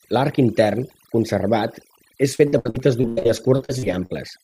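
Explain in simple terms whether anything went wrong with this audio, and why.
Overdone noise removal runs through the whole clip. The cleanup was set too aggressive, so the background drops and breaks up into twinkly bits, and the quieter parts of the speech get stripped out too.

From about 2.35 to 4.14 s there's repeated packet loss, which gives a robotic sound. Around two dozen short holes, the longest about 86 ms, get patched by stretching the previous sound. About a third of that stretch is filled in this way, so it turns choppy.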